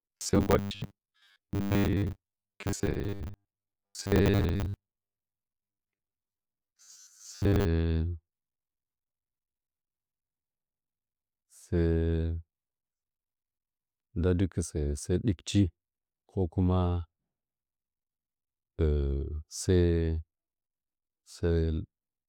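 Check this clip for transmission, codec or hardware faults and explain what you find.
One fault is present, robotic sound from repeated short buffers. It runs from 0.01 s to 7.65 s. The speech becomes a rigid, metallic buzz with a fixed pitch of 100 Hz. The syllables still roughly follow their shape. The likely cause is audio arriving too seldom, with the gaps filled by repeating a 10 ms slice. That slice length sets the 100 Hz buzz. Most of the audio in this stretch is repeated rather than new.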